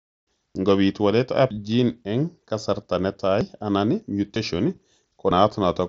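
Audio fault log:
0.55, 1.51, 3.41 (right after "eng' kasarta"), 4.36 and 5.31 s, audio missing between chunks: the speech skips ahead by roughly 50 ms each time, about once a second, with the edges butted together. That's likely a recorder dropping audio at each chunk handover.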